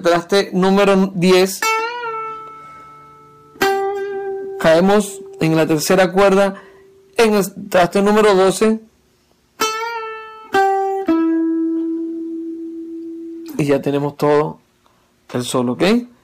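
From start to finish the audio suffers hard clipping. The signal is pushed about 12 dB beyond what a stage in the chain can pass, so every peak is sliced flat, with around one sample in twenty cut off at that stage's limit. Those squared-off tops spray harmonics high into the spectrum, giving a harsh, gritty fuzz on each loud moment. Unlike gentle saturation, which rounds peaks and thickens warmly, this distortion is abrupt and brittle, switching on exactly at the loudest instants.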